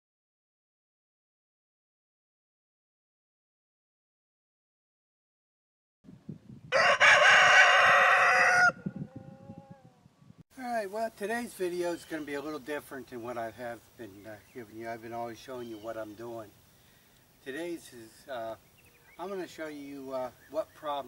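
Periodic USB or driver dropouts: something blocks the USB bus or audio driver at a steady 2.0 s interval, and each time roughly a millisecond of audio is replaced by silence. This gives about three evenly spaced ticks between 16.5 and 20.5 s.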